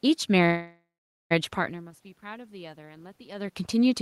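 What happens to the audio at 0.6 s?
At 0.6 s the speech has stopped and is replaced by a fading buzz-like continuation of the last sound, which dies away into about 0.45 s of silence. This call audio freeze runs from 0.45 s to 1.33 s, about 0.85 s of filled-in sound. The likely cause is packets held up in transit, so the jitter buffer ran dry. When they arrive, speech resumes where it stopped with nothing lost, but about 0.85 s later than it should.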